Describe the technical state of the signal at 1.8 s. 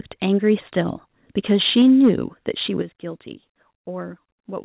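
At 1.8 s the speech is inside a stretch of microphone overload from 1.51 to 2.1 s: peaks are flattened at the converter ceiling, likely from input gain about 4 dB too high, giving a harsh crackle. At 1.82 s the microphone volume steps down by about 3 dB, likely an automatic gain correction reacting to the clipping, so the level drops abruptly mid-phrase.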